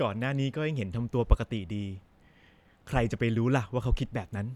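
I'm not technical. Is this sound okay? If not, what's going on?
Yes, nothing stood out as a problem when listening to this recording.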